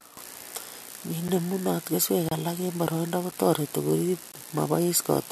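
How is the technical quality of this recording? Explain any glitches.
Four brief silent dropouts interrupt the speech. At 1.28 s, 2.29–2.32 s (just before "alage eng boroindo"), 3.31 s (just after it) and 4.32 s, a gap between stream segments occurs. Timestamps on consecutive 1-second segments leave 8–28 ms holes that the player fills with hard-edged silence, roughly once per second.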